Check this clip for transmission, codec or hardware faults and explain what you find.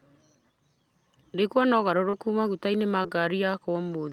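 Two brief transmission faults are audible in the speech. Short concealed packet loss occurs at 2.09 to 2.15 s and again at 3.03 to 3.08 s. About 40 ms, then 20 ms, of audio arrived too late, and the receiver extended the preceding sound to cover each gap before blending back. Each repair is heard as a short smear or wobble.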